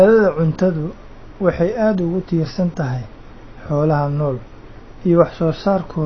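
Throughout, AAC compression at a low bitrate is the likely cause: the encoder discards everything above 6.6 kHz and quantises the rest coarsely. The speech sounds dull and muffled, with plainly audible smearing and a warbling, fizzy edge that points to roughly 24 kbps AAC-LC.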